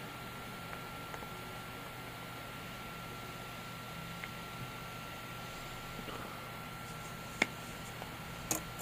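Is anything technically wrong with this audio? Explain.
No, no technical faults are present.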